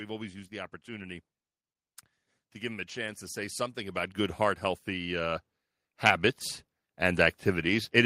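A speech recording with automatic gain rising: from 2.38 s to 6.31 s the AGC lifts its gain by about 12 dB, swelling voice and background together, then climbs again by about 3 dB between 6.98 s and 7.95 s, responding to input it judged too quiet.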